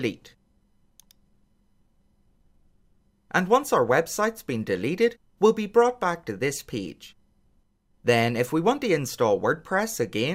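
Nothing goes wrong anywhere in the clip, so there's no technical fault to point to.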